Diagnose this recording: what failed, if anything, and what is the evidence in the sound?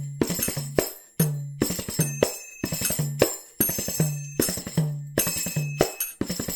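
Unsynchronised converter clocks likely slip a sample every tenth of a second, giving clock slip clicks: faint regular ticks from 0.12 to 6.45 s.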